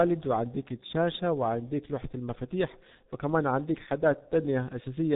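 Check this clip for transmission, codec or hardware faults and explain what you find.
The clip shows one fault, present from start to finish: heavy G.723.1 codec damage on the speech. Nothing survives above about 3.8 kHz. The codec models the voice in 30 ms frames at a very low rate, consistent with roughly 6.3 kbit/s, so the spectral envelope updates sluggishly. Consonants smear, and the speech sounds muffled and hoarse. On a spectrogram, energy stops abruptly at 3.8 kHz, and formants appear blocky and stepped frame by frame.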